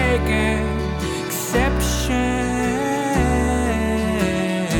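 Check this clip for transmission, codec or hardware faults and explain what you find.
One fault stands out. At 1.76 s a single sharp snap, peaking around -25 dBFS, sits on top of the sound: an electrical switching spike, likely a nearby switch arcing onto the audio line.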